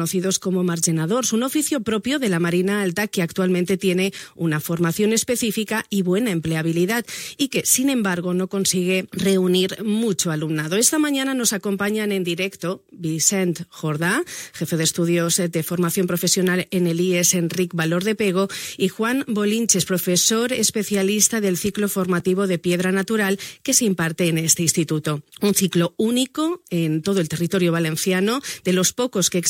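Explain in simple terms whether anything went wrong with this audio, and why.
A block of digital silence occurs at 22.2 s. For about 2 ms, the audio drops straight to silence and then returns, with no fade either way. That abrupt cut and restart is heard as a single quick tick, too brief to register as a gap.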